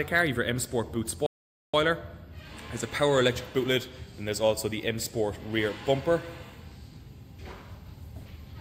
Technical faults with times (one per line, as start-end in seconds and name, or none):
1.26-1.74 playback stall